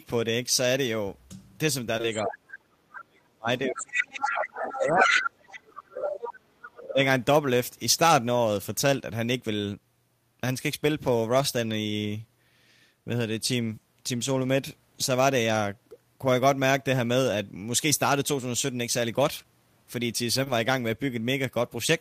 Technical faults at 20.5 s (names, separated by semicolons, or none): short concealed packet loss; lost packet rebuilt from error correction